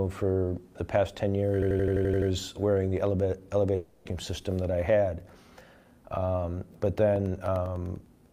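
From 1.62 to 2.30 s, one 85 ms slice of audio repeats eight times at 11.7 Hz, a machine-gun stutter. This is a system hang loop: the machine froze while the hardware kept replaying the same ring buffer, which fits a 4096-sample buffer. Essentially nothing is lost.

At 3.75 s the sound turns into a fading continuation of itself that runs for about 300 ms. The audio resumes at 4.07 s with that stretch missing. The likely cause is a long network dropout, where the receiver concealed the gap by extending the last sound it had.

Between 7.16 and 8.26 s, a row of about ten ticks falls every 0.1 s. These are periodic USB or driver dropouts: a background task stalls the bus or driver at a fixed interval, and each stall swaps roughly a millisecond of audio for silence.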